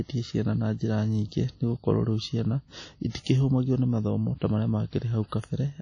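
From the start the speech carries codec damage you can plainly hear, most likely WMA compression. There's nothing above about 10.1 kHz, so the top end feels shut off. The sound has a ringing, washy quality, with a hiss that rises and falls along with the voice. That fits a transform coder running at a low rate, something like 32 kbps. It spreads its coarse quantisation noise through each block and simply drops the weaker spectral detail.

At 3.10 s there's a pre-echo, running to about 3.15 s, so roughly 52 ms of smear. A sharp attack lands late in a coding block, and the noise the encoder budgeted for that loud moment gets spread evenly across the whole block. That includes the quiet stretch before the attack. So you hear a brief hiss arriving just ahead of the onset, and the attack itself comes across softened rather than crisp.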